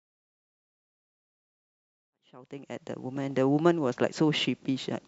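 Nothing stood out on listening to this speech recording, whose level rises in a smooth, editor-style fade-in from around 2 s to full level at 3.51 s.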